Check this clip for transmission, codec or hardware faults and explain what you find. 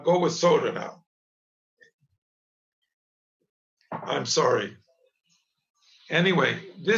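Nothing found: no transmission, codec or hardware faults are audible anywhere in the clip.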